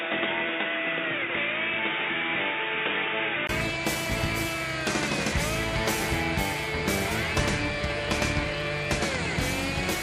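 From 0.0 to 3.49 s the audio is dull and boxy, with nothing above 3.7 kHz and faint added noise, then a 20 ms gap before it clears; likely an input switched to a poorer device.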